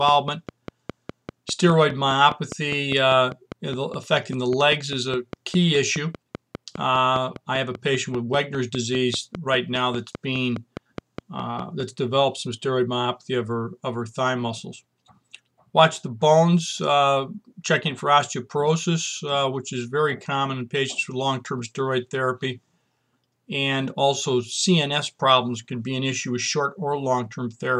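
From 0.09 s to 11.81 s a train of clicks runs at a steady 4.95 per second, around fifty in all, each peaking a few decibels above the programme and audible in pauses. Likely cause: interference from nearby equipment or a faulty connection or power supply.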